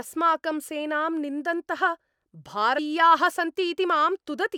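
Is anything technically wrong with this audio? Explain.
Yes. Damaged data in a compressed stream at 2.75 to 2.79 s: corrupted bytes make the decoder misread frames and resynchronise, producing a brief glitch in the speech, heard as a chirp, squawk, click or short hole.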